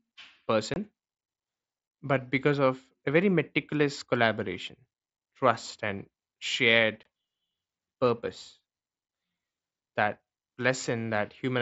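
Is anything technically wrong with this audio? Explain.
Yes. Unconcealed Bluetooth headset packet loss occurs at 0.74 to 0.76 s and 7.03 to 7.06 s. Each gap is about 22 ms, which fits three lost voice frames. Nothing fills them. The speech drops out briefly, with hard, abrupt edges.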